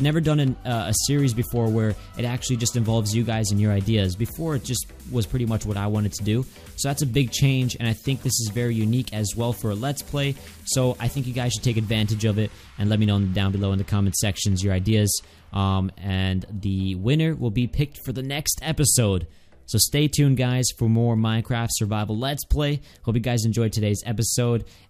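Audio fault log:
Nothing to log here, as there's no fault anywhere in this audio.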